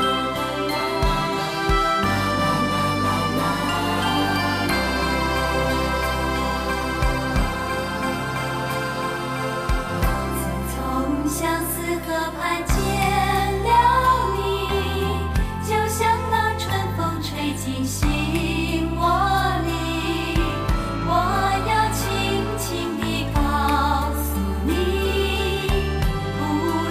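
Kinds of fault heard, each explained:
No technical faults are audible anywhere in the clip.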